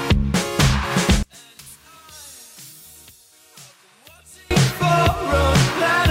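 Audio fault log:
1.23–4.51 s, one channel inverted: sound collapses by about 27 dB to a faint residue, likely reversed polarity cancelling shared content in mono; the waveform shrinks and the spectrogram dims.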